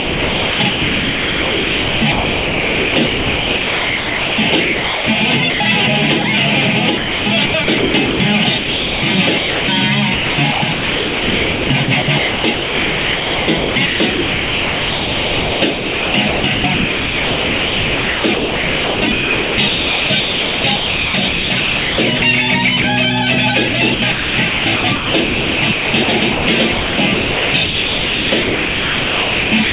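Sound chopped by the voice detector runs from 0.0 to 5.6 s, 6.98 to 22.22 s and 23.68 s to the end. About 4.6 s, 11.1 s and 4.2 s respectively are replaced by smooth comfort noise, likely from the sender's detector repeatedly gating quieter passages. On a spectrogram this appears as flat, featureless noise patches alternating with detailed real content, all capped at 4 kHz by the narrowband call path. Brief sound dropped by the voice detector occurs at 6.22 s and 22.82 s, where about 20 ms of sound is likely swapped for comfort noise, showing in the waveform as a tiny low-level notch.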